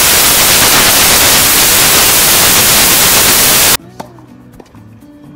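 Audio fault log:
0.00–3.76 s, samples built from the wrong bytes: the bytes of each sample are assembled wrongly, shifted by a byte, swapped in order or misaligned, so the fast-changing low bits land in the most significant position, producing loud, harsh broadband noise.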